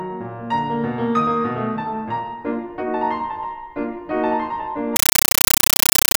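At 4.96 s the music gives way to a compressed stream played as audio, lasting to the end at 6.19 s. An AC-3 bitstream reached the output undecoded and was treated as ordinary samples, so each frame comes out as a burst of noise about 9.33 ms long, then zero padding, repeating at 31.25 Hz. The chatter pattern fits a 448 kbps AC-3 stream. That strict, even pulse of loud static separated by silence sets it apart from random digital noise or clipping.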